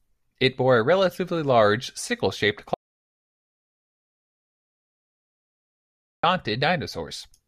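An audio dropout to silence runs from 2.74 to 6.23 s, cutting the speech off mid-flow for about 3.5 s of silence with no room tone. The input was likely lost while recording continued writing silence, so that stretch of speech is gone.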